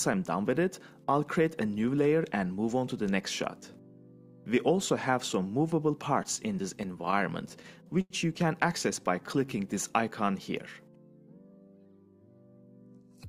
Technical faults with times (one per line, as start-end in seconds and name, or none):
6.23-8.13 repeated stalls (stutter)
9.00-9.59 jitter buffer slow-down